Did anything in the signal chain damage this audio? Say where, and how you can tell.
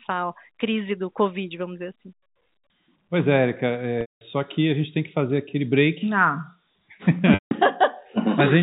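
Yes. The damage is in the network stage: packet loss with pitch repetition, at 4.01 to 4.21 s (200 ms, just before "só que a gente") and at 7.34 to 7.51 s (170 ms). In each gap the receiver repeated the last pitch period, giving a held, buzzy tone that fades out after about 50 ms into silence, then cross-fades back into speech. The lengths fit lost runs of 10 ms packets. The G.711 telephone band around it is intact.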